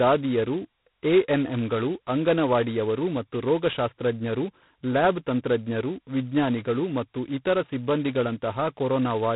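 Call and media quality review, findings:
G.726 ADPCM, heavy coding damage, throughout the speech. Harsh rasping hiss riding on the voice, rising and falling with speech level and vanishing in pauses, unlike a steady noise floor. Band stops at 3.8 kHz. Coarse 2-bit difference coding against adaptive prediction, which fits 16 kbit/s, the lowest G.726 rate. Probable component: G.726 ADPCM codec running at 16 kbit/s.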